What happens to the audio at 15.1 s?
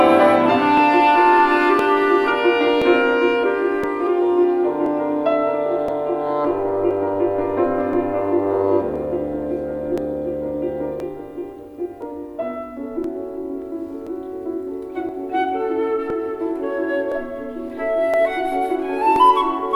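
Around 15.1 s you're inside a run of periodic USB or driver dropouts: from 0.77 to 19.16 s, roughly a millisecond gets skipped every 1.02 s, giving regular little ticks.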